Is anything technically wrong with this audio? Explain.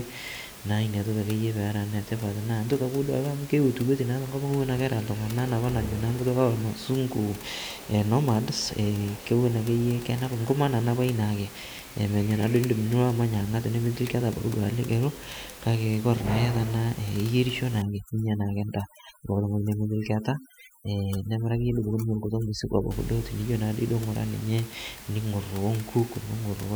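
Yes. Overdone noise removal runs from 17.82 to 22.91 s. An over-aggressive noise reducer is cutting frequency bands near its noise estimate, leaving twinkling near-silence and taking quiet parts of the voice with it. The room noise, about 18 dB below the speech, is part of the recording itself.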